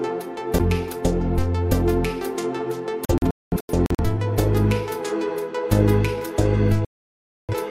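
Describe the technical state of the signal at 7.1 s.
A digital broadcast dropout covers 7.1 s, running from about 6.85 s to 7.54 s. The receiver stopped getting decodable frames, either because the signal was lost or because frames failed their checksum, so it muted its output instead of playing corrupt data. At 7.1 s the sound is cut to silence. About 640 ms of programme is missing, which fits around 15 lost frames, and the audio resumes later in the programme.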